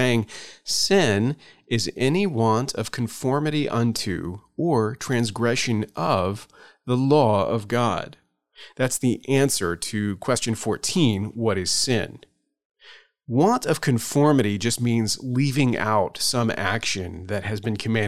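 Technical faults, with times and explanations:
No technical faults are audible anywhere in this speech recording.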